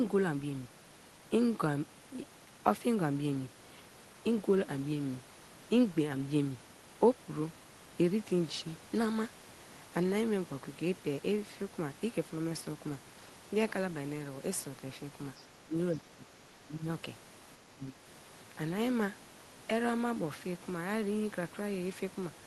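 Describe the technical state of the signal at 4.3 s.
At 4.3 s the speech comes through intact, with nothing beyond the ordinary coding character of the Opus call path it travelled through.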